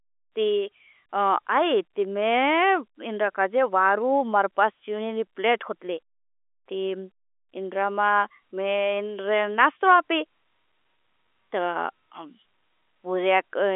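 Nothing in this speech clip stood out as a technical problem on listening.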